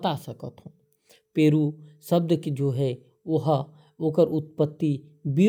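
No technical faults can be heard anywhere in this recording.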